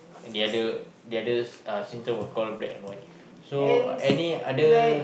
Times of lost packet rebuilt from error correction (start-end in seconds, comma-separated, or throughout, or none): 2.61-2.71